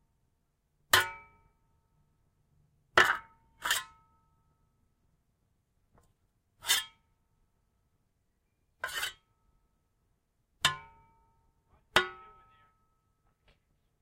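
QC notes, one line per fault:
Nothing stood out on listening to this recording of sounds.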